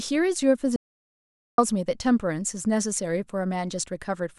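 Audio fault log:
0.76–1.58 s audio dropout to silence: the speech cuts off abruptly and returns mid-flow after about 0.82 s of silence with no room tone underneath. This likely comes from the input signal being lost while the recorder kept writing silence, so that stretch of speech is gone.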